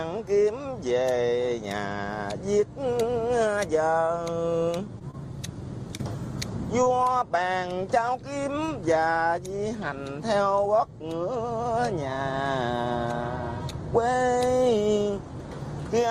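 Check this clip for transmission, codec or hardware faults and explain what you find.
Two kinds of network fault occur, both clustered between about 5.0 and 8.8 s.

Short stalls from a late packet occur at 4.99–5.03 s, 7.04–7.08 s and 8.66–8.82 s. Each time a packet arrived late and the jitter buffer ran dry, so the receiver held the last sound for about 20 ms (19 ms in the third case) until data resumed from the same point. Nothing is lost, but the held sound carries a slight buzz or dip. The playout delay grows by about 20 ms each time. At 8.66 s, 6 ms is later trimmed to recover.

Short concealed packet loss occurs at 5.11–5.15 s, 5.97–6.01 s and 6.84–6.88 s. Each time, 20 ms of audio never reached the decoder, which extrapolated the preceding sound for 21–24 ms before crossfading into real data. The result is a brief smear or wobble where the true content is replaced. At 6.84 s the patch runs a few milliseconds longer than the gap.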